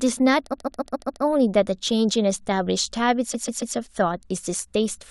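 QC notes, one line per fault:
0.52–1.22 s, repeated frames: the same block of speech, about 139 ms long, plays five extra times in a row, giving a rapid stutter. That block length fits a run of six compressed frames being sent again. The stutter adds about 0.7 s, and nothing is missing, which separates it from a dropout or skip.
3.33–3.75 s, repeated frames: the same roughly 139 ms block recurs three extra times, adding about 0.42 s. Because the repeating unit is a codec-frame-sized chunk rather than a few milliseconds, it sounds like a stammer of whole syllable fragments, not the buzzy tone of a short buffer loop.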